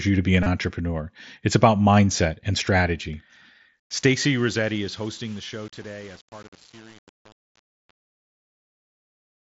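This speech clip, carried over a wideband mSBC Bluetooth headset link, has two faults. The first is concealed Bluetooth headset packet loss, from 0.43 to 0.46 s. About 30 ms of audio goes missing there, which fits a short run of lost packets. The receiver patches the gap by repeating the closest-matching recent stretch of waveform. The result is a brief buzzy, held tone at full level, with a slight warble as real audio resumes. The second fault is truncation distortion on a fade, from about 3.8 s to the end at about 9.5 s. The fade-out runs from about 3.8 s to the end. But the stage doing it keeps too few bits and adds no dither, which points to roughly 7-bit resolution. As the level drops toward the smallest step, the waveform collapses into coarse square steps. The tail turns gritty.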